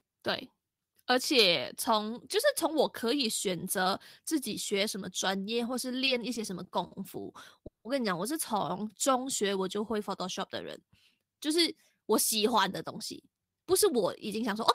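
From 6.05 to 6.93 s there's repeated stalls (stutter): packets kept arriving late, so four short gaps, the longest 50 ms, got filled by stretching the last sound, and the speech drags. At 7.67 to 7.87 s comes a call audio freeze, a 180 ms hole that mostly drops to silence, likely from packets held up in transit before the audio picks up again. Then from 12.51 to 14.60 s a jitter buffer speed-up clips roughly 150 ms of pitch periods to shed built-up delay, so the speech runs about 6% faster and sounds a bit hurried.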